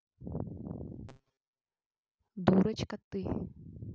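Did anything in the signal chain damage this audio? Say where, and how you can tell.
Yes: from 1.09 to 1.62 s the speech becomes a rigid, metallic 133 Hz buzz, robotic sound from repeated short buffers, likely a starved driver buffer looping roughly 7.5 ms chunks.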